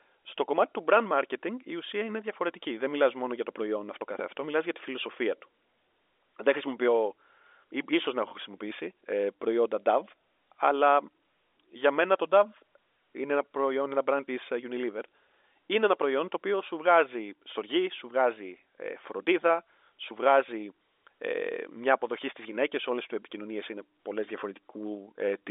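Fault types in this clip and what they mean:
No fault types occur in this clip, so there are none to explain.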